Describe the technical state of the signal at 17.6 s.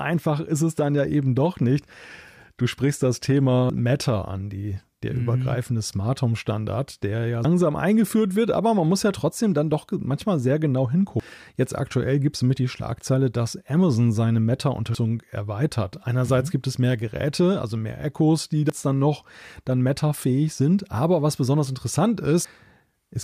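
At 17.6 s the speech signal is intact, with no fault audible at that moment.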